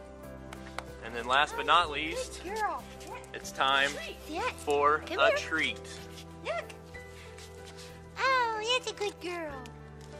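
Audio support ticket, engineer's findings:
No faults found. Nothing heard that points to a problem in the capture or playback chain.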